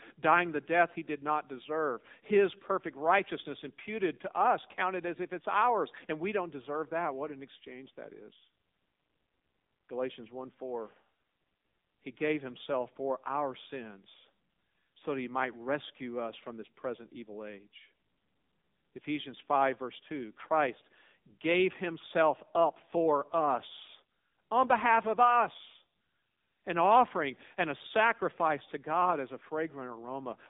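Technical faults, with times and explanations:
Throughout, AMR narrowband mobile codec: the speech is confined to 150 Hz to 3.7 kHz, with plainly audible coding damage that fits a rate near 7.4 kbps, as a vocal tract model and sparse pulses rebuild it. A spectrogram shows a hard ceiling at 3.7 kHz.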